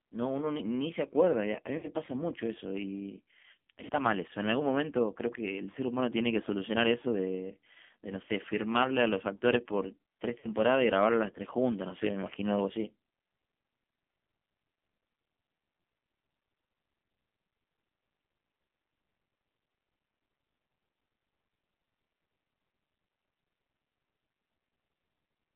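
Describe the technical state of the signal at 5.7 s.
At 5.72 to 5.76 s there are lost AMR speech frames. One 20 ms frame failed in transmission. The decoder reused the previous pitch and vocal tract settings at reduced gain, which produces a brief dip or warble.

Underneath, the AMR narrowband mobile codec limits the band to 200 Hz to 3.5 kHz. The coding damage is heavy, giving a buzzy, synthetic sound that fits a 5.9 kbps mode.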